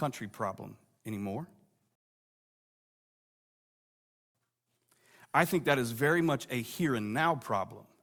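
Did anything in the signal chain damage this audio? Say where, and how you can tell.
Yes, at the playback stage: a rebuffering stall. Just after "problem anymore" the speech cuts to silence at 1.95 s and stays silent until 4.35 s, then carries on from exactly the point where it stopped, with nothing skipped. That clean resume is the giveaway. The player drained its store of downloaded audio and paused until more data arrived, so no speech is lost, but about 2.4 s of dead air is added.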